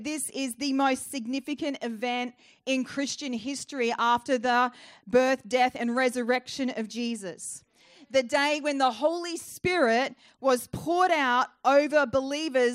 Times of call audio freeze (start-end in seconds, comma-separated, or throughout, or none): none